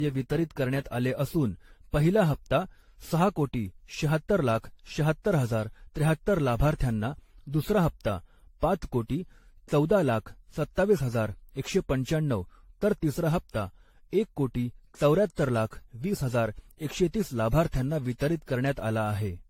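From start to finish the speech sounds swirly and hollow, with a watery smearing around consonants and blunted attacks, and nothing reaches above 16.6 kHz. The damage is heavier than one pass at a moderate bitrate would leave, so the likely cause is generation loss: the audio seems to have gone through an AAC-LC chain at around 64 kbit/s some seven times, each re-encode quantising on a shifted frame grid and compounding the artefacts.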